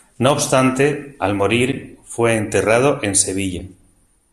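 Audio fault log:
1.72 s and 3.59 s, block of digital silence: 8 ms and 3 ms of zeros, abrupt edges with no fade, so each lands as a sharp tick.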